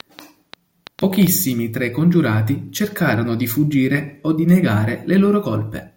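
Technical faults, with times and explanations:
0.00–1.28 s: train of clicks. About seven sharp, similarly shaped clicks arrive at an uneven pace averaging 5.5 per second, ticking over the speech and its gaps alike. The peaks stand about 5 dB above the speech itself. Repeated pulses of the same shape like this most likely come from electrical interference or a faulty connection or power supply injecting transients into the signal path.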